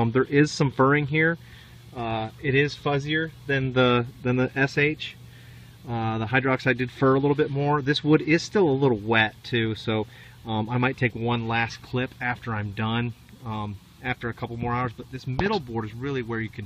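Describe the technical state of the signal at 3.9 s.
At 3.9 s the signal is intact, with no dropout, distortion or other fault at that point.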